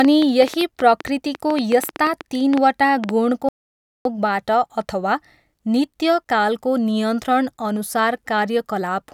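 From the start to 3.10 s, a train of clicks runs over the speech. There are about twenty, at roughly 7.1 per second, spaced unevenly. They peak around 10 dB above the speech. The likely cause is interference or a faltering interface injecting pulses.

At 3.49 s the audio drops out to silence and returns at 4.05 s. About 0.56 s is lost. The gap is silent, with no room tone. The input was likely cut off while recording continued.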